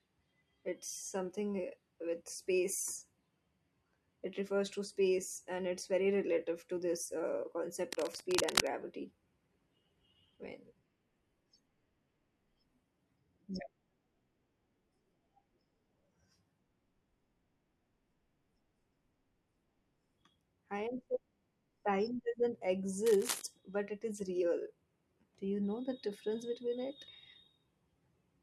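At 7.88 s a burst of cable scratch noise cuts across the speech for about 0.8 s. It is dense, ragged crackling, roughly as loud as the speech itself. A second, shorter burst comes at 23.06 s and lasts about 0.36 s, somewhat quieter. Both sound like a worn cable or connector being moved. The contact resistance likely jumps about rapidly as it shifts. That turns into uneven rustling noise laid over the speech.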